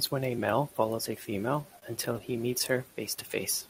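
From 1.61 s to 2.73 s the speech suffers repeated stalls (stutter): eleven brief hiccups, the longest about 30 ms, where packets arrived too slowly and the jitter buffer kept running dry. Each time, the receiver stretched the last sound to bridge the wait, roughly 127 ms in all, about 13% of that stretch. Unlike packet loss, nothing is skipped; the audio simply drags and judders before catching up.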